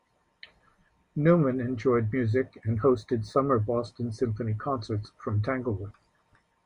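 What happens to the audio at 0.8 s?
Nothing goes wrong at 0.8 s; the speech runs through that moment intact, with no dropout, click, distortion or other fault to be heard.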